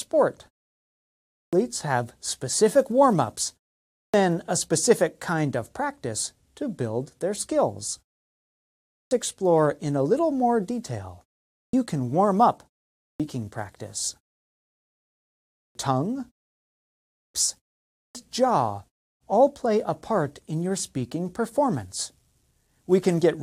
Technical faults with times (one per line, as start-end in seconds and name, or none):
1.27-1.53 clipped start after a pause
3.85-4.14 clipped start after a pause
8.84-9.11 clipped start after a pause
11.48-11.73 clipped start after a pause
12.91-13.20 clipped start after a pause
15.50-15.75 clipped start after a pause
17.06-17.34 clipped start after a pause
17.87-18.15 clipped start after a pause